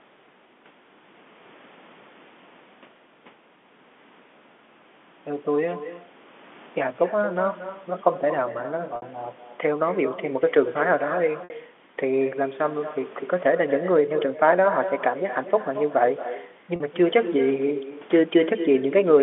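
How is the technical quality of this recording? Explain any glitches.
The recording has two clear faults: an uncancelled echo trailing the speech throughout, and three short dropouts bridged by pitch repetition. The telephone band, roughly 200 Hz to 3.5 kHz, is what G.711 coding normally passes.

Echo with no canceller runs from start to finish. The far end's loudspeaker feeds its microphone, and nothing subtracts that path, so every phrase returns about a fifth of a second later, about 12 dB down, sounding thinner than the original.

Packet loss with pitch repetition occurs at 8.96 to 9.02 s (60 ms), 11.44 to 11.50 s (60 ms) and 16.76 to 16.80 s (40 ms). The gaps fit lost 20 ms packets. The receiver loops the last pitch period and fades it, producing a brief buzzy hold before speech cross-fades back in.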